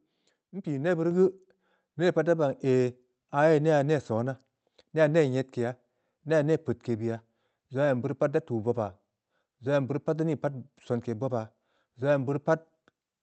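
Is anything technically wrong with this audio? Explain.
Yes, there's a microphone volume step-up at about 1.11 s. The whole level jumps by about 4 dB in one go, and the speech and the background noise behind it get louder together. That's the call software deciding the mic was too quiet and bumping the device's input volume mid-stream, so there's no fade, just a sudden lift that stays. The audio also comes through a call codec, and the top end stops around 8 kHz, which fits Opus at a moderate bitrate.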